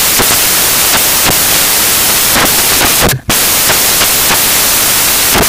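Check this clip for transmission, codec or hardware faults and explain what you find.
The whole clip carries one fault: samples built from the wrong bytes. The reader assembles each sample's bytes wrongly, so fast-changing low bits dominate, giving loud, harsh broadband noise, close to white on loud sounds.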